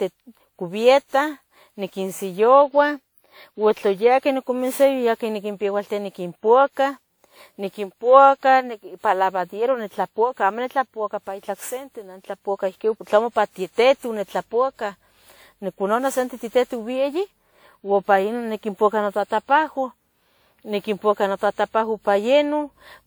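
Repeated lossy re-encoding, likely around ten passes through a WMA codec at a rate consistent with 96 kbit/s, has left this speech recording with generation loss throughout, its content still reaching about 20.1 kHz yet sounding swirly, hollow and smeared, with consonant attacks blurred.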